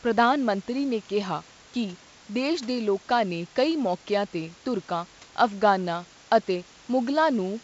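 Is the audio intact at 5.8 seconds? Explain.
Yes, at 5.8 seconds the audio is intact, with only the room noise, about 29 dB below the speech, and the ordinary G.722 wideband coding at 64 kbit/s.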